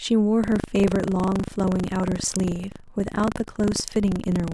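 From 0.4 s to the end, buffer tearing: the buffer's writer and hardware reader have slipped, so each period splices in about a tenth of audio from some 70 ms earlier. It sounds like a steady 25 Hz robotic rattle with no silent gaps, unlike an underrun.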